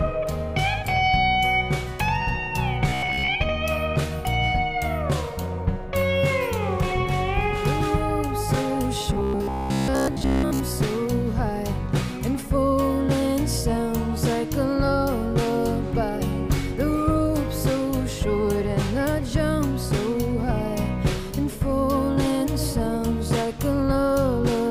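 Robotic sound from repeated short buffers at 2.89 to 3.30 s and again at 9.13 to 10.6 s: the audio turns into a rigid metallic buzz at 66.7 Hz, likely from a 15 ms buffer being replayed while most of the real audio is skipped.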